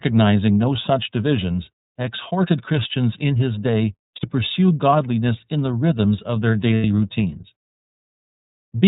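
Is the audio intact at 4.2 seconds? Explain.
No. From 4.16 to 4.25 s, between "in his day" and "pursue godliness in the", the speech turns into a brief held, slightly buzzy vowel. These are lost iLBC frames: the decoder filled about 60 ms, consistent with two missing 30 ms frames, by repeating the last pitch cycle mixed with noise, and the speech recovers at once.

Around that moment the sound is also narrowband, a little rough and synthetic, from the iLBC codec. Nothing above 4 kHz survives, and the coding of each 30 ms frame on its own leaves plainly audible damage, consistent with the 13.33 kbps mode.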